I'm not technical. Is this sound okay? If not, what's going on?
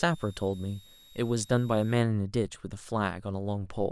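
No. A switching supply whistle runs from the very start to about 2.0 s, underneath the speech. It's a thin, high-pitched whine, sliding around between about 3.6 and 3.8 kHz. Some power adapters and chargers switch on and off thousands of times a second, and when that switching falls into hearing range, the electronics sing. The whistle leaks into the recording and wanders in pitch as the power demand shifts.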